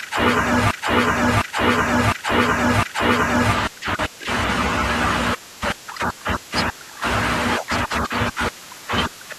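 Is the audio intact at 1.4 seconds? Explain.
No. At 1.4 seconds the speech is caught in a broken-record loop running from 0.71 to 3.53 s: a 0.71 s fragment plays four times back to back, identical each pass, and the speech that belonged in that stretch never arrives. The likely cause is a stalled player or stream resending its last buffered fragment. Unlike an echo, the repeats do not fade or overlap, and unlike a short stutter they run for seconds.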